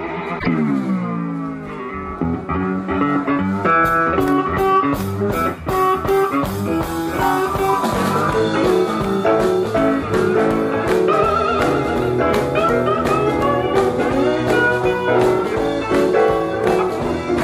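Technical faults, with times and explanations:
0.35 to 0.46 s, damaged data in a compressed stream: for about 0.11 s the decoder is fed corrupted frames, misreads or rejects them, loses sync and hunts for the next valid frame header before normal decoding resumes. What marks it out from a plain buffer dropout is that the disturbance comes from garbled coded data rather than simply missing audio, so it is tied to codec frames and not to playback timing.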